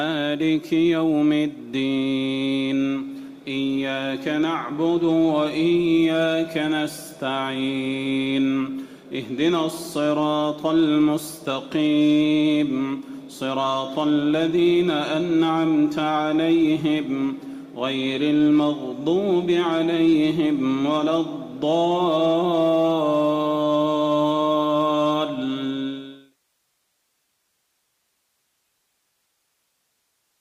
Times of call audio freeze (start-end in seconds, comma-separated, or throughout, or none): none